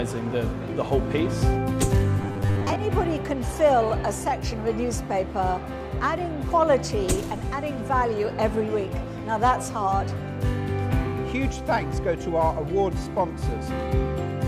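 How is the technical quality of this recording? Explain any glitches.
One glitch stands out. From 2.22 to 2.77 s, robotic sound from repeated short buffers appears. About half the audio is likely replaced by repeats of a 10 ms buffer. This imposes a rigid, metallic 100 Hz buzz.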